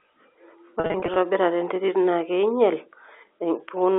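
A speech recording carried over a telephone line, band-limited to roughly 300 Hz to 3.5 kHz, suffers packet loss with pitch repetition between 0.80 and 1.16 s. Over those 360 ms, about 160 ms of audio goes missing in short bursts, none longer than 40 ms, which fits about eight lost 20 ms packets. Each gap is bridged by repeating the last pitch period, so the damage sounds like brief buzzy, held tones rather than hard silent dropouts or clicks.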